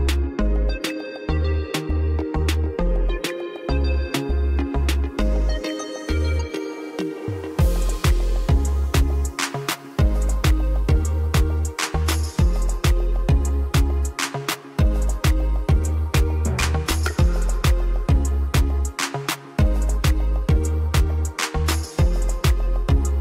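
No technical faults turn up anywhere in this recording, so there's nothing to flag.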